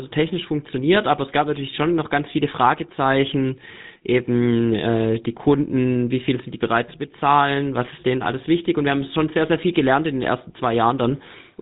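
Speech, carrying the GSM full-rate codec for its whole length. Nothing survives above 3.9 kHz. The coder rebuilds the voice from a vocal-tract model driven by sparse, regularly spaced pulses. That leaves a plainly audible buzzy, gravelly roughness, consistent with a 13 kbps GSM link.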